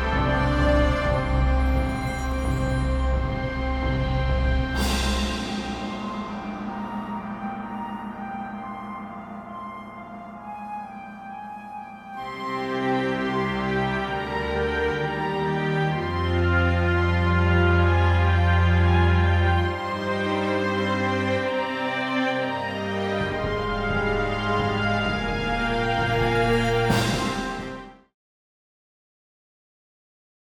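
No technical faults can be heard anywhere in the audio. Near the end the level fades out smoothly, beginning at roughly 26.5 s and reaching silence at 28.15 s, with no click or hard edge.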